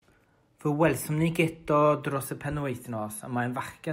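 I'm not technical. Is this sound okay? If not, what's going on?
Yes, it's fine; I can't hear any problems.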